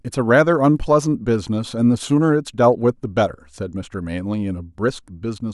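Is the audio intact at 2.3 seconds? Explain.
Yes, at 2.3 seconds the speech plays through with no dropout, click, glitch or other fault to be heard.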